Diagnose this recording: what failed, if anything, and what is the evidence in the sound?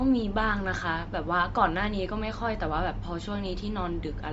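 Throughout the speech, the top of the band is missing above about 7.7 kHz, and the voice carries a plainly audible breathy, grainy edge. This is likely Bluetooth LC3 compression at the codec stage: starved of bits, the encoder drops upper spectrum and fills it with noise, which fits roughly 32 kbps with 10 ms frames.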